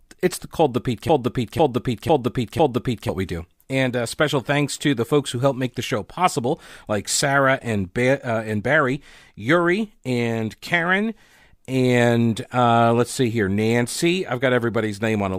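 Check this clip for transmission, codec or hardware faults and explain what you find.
A broken-record loop runs from 1.09 to 3.09 s in this speech clip. The same 0.5 s fragment plays four times back to back, identical each pass, before normal audio resumes at "we do". The repetition points to a stall in the player, encoder or stream, which likely kept resending the last fragment it held. Whatever should have been heard during those two seconds is lost.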